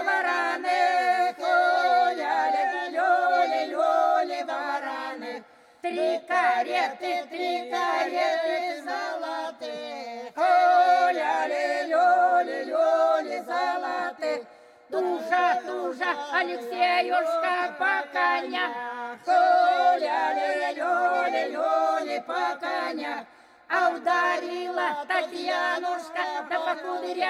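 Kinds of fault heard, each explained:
No technical faults can be heard anywhere in this clip. The audio runs without any dropout, distortion or other disturbance to its playback.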